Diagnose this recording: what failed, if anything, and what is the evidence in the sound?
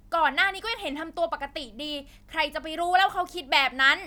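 Nothing failed; no audible fault anywhere in this speech.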